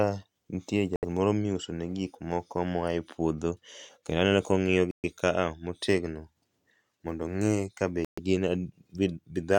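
Three brief dropouts to silence interrupt the speech: at 0.96 to 1.05 s with about 70 ms of silence, at 4.91 to 5.05 s with about 127 ms, and at 8.05 to 8.20 s with about 128 ms. Each time, sound stops abruptly and resumes mid-flow. These are likely Bluetooth stalls, where the headphones' buffer ran empty while delayed packets were resent. A waveform shows flat near-silent stretches with hard edges, and a spectrogram shows clean full-band vertical gaps.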